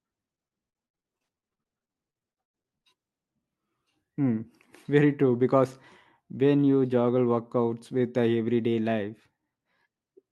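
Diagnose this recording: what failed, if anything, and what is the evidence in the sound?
Choppy, robotic speech from 0.35 to 2.86 s, with many short dropouts (the longest about 110 ms) and smearing where the last sound is stretched over missing stretches. This is repeated packet loss on the network: lost packets were concealed, covering roughly a third of that span.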